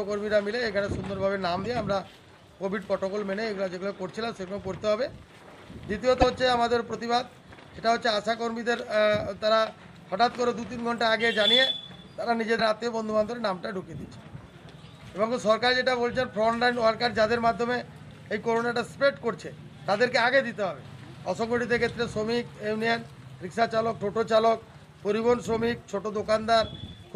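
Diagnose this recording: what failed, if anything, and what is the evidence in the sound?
The failure is at the codec stage, most likely a broken MP3 bit reservoir. The sound skips forward with a brief disruption lasting about 30 ms at 1.63–1.66 s, 6.21–6.24 s and 12.58–12.61 s, in a stream of MP3 frames of 26.1 ms. When frames drop out, the frame that follows still reaches back into the reservoir for its borrowed data. It decodes someone else's bytes instead, so the audio jumps and the first few frames after the gap come out wrong.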